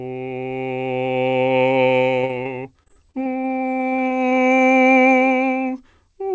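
Around 2.22 to 2.31 s and again at 2.43 s, the music gets short concealed packet loss: brief holes patched by extending the last sound, heard as quick smears or wobbles. From 2.83 to 4.6 s it turns into repeated packet loss, with 13 gaps of up to 28 ms each, so the music goes choppy with pieces missing, over a band that stops at 8 kHz.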